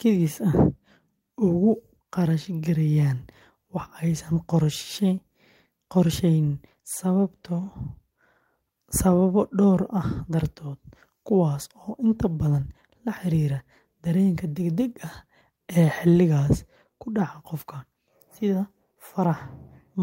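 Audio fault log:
Listening closely to this speech recording, nothing stood out as a technical problem at any point.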